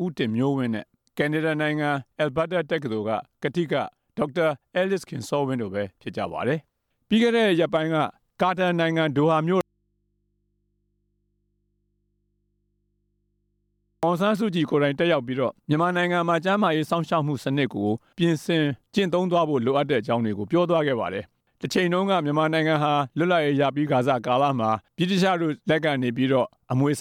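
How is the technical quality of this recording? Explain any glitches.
The recording has one clear glitch. From 9.61 to 14.03 s, an audio dropout to a faint residue removes the sound for about 4.4 s, leaving only mains hum roughly 50 dB down, likely from a live but open input. The abrupt cut and return, with hum instead of silence, set it apart from a pause or fade.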